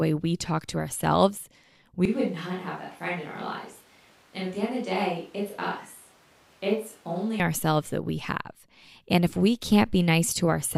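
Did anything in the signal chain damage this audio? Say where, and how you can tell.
Yes. From 2.05 s, right after "we talk to ourselves", the speech suddenly turns roomy and hollow, loses bass, drops roughly 10 dB and sits over audible room noise about 30 dB down. It snaps back at 7.40 s, at "ourselves that we". This is likely a switch to a distant microphone at capture.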